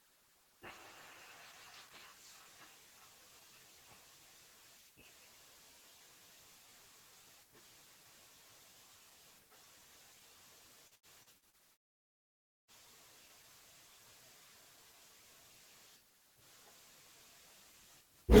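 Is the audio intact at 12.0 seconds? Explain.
No, 12.0 seconds sits right inside a long network dropout running from about 11.73 to 12.71 s. The incoming stream most likely stopped arriving for roughly a second, so the receiver stretched the last bit of sound into a buzzy tail that fades out, leaving near-silence for the rest of the gap. When the speech resumes at 12.71 s, about 0.96 s of it is simply gone, not delayed.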